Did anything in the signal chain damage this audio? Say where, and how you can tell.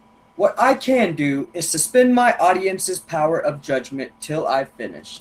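No, the signal chain left no audible damage anywhere.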